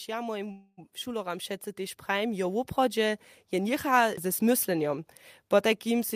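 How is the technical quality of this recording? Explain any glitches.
The recording has two glitches near the start, both typical of a live call link.

Automatic gain rising, from 0.06 to 2.68 s: the automatic gain control judged the incoming speech too quiet and turned its gain up step by step, by about 8 dB. Speech and background noise swell together across those first two and a half seconds.

Call audio freeze, from 0.51 to 0.79 s: the last sound is stretched into a fading buzz or hiss for about 260 ms, ending in roughly 30 ms of silence, then the speech resumes where it broke off. Packets were likely held up in transit and emptied the jitter buffer. Nothing is lost, but everything after runs about 260 ms later.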